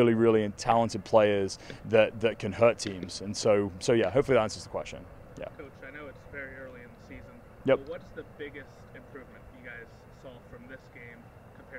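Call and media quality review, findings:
Nothing to flag here; the audio comes across as steady and intact, with no dropouts, glitches or other faults to report.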